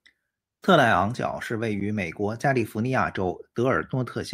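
No technical faults can be heard anywhere in this speech recording. Nothing in it calls for a timestamp or a diagnosis.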